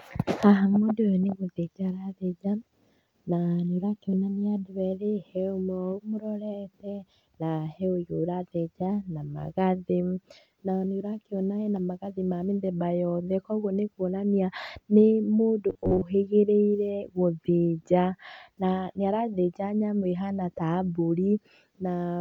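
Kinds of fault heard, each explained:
Robotic sound from repeated short buffers: From 15.70 to 16.02 s, just after "nĩ kuonania nĩ mũndũ", the speech turns into a stiff metallic buzz. The buzz holds a fixed pitch of 93.8 Hz, which fits a block of about 11 ms being looped. Most of this stretch is repeated audio. The likely cause is input arriving too seldom, so the software replays the last short block and skips the real audio.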